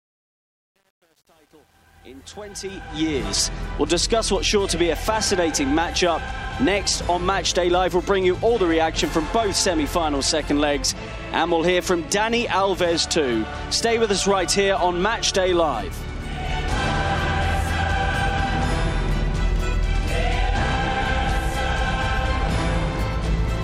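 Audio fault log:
0.00–3.28 s, truncation distortion on a fade: the fade-in from the very start has a quiet portion that is coarse and grainy, worst from 0.0 to 2.6 s. With so few amplitude steps available and no dither, the waveform collapses into blocky square steps, which fits a gain stage keeping only about 9 bits.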